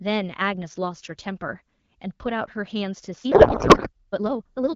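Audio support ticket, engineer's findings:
Time-stretched section, 3.18 s to end. Speech abruptly rushes at roughly 1.88x pace, pitch unchanged. Likely time-scale software dropping short segments to shorten the passage. Unlike a wrong playback rate, there is no chipmunk pitch rise, only compressed timing.

Codec payload misread, 3.32 to 3.90 s, inside the sped-up stretch. Speech replaced by garbled noise and warble that barely tracks it. Octet-aligned AMR frames read as bandwidth-efficient, so every field is offset. Unlike packet loss there are no gaps or concealment fades: frames decode continuously into nonsense, then clear AMR-WB at 12.65 kbit/s returns.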